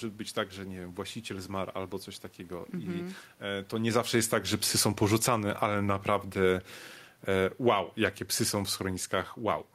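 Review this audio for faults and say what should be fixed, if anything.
Automatic gain falling runs from 2.92 to 7.83 s. The gain control judged the input too loud, or its background noise too strong, and pulled it down by about 10 dB, so the voice and room noise sink together. Automatic gain rising interrupts this from 5.49 to 6.48 s, lifting both voice and background by about 3 dB over roughly a second before the fall resumes. The level change around 3.5 s, where the talker moves relative to the microphone, is ordinary and not a fault. To prevent this, disable the automatic gain control or slow its time constants, and set a fixed input gain with adequate headroom.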